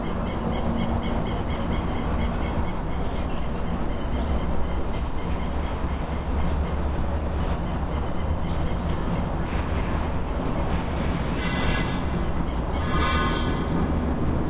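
No technical faults can be heard anywhere in this audio.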